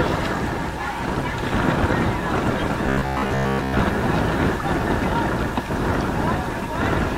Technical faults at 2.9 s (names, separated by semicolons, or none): robotic sound from repeated short buffers